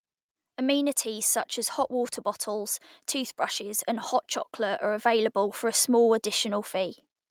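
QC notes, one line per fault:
1.03–7.02 s automatic gain rising: the gain control judged the input too quiet and turned itself up, lifting the level by about 9 dB over six seconds. Background noise swells with the speech, unlike a talker simply getting louder.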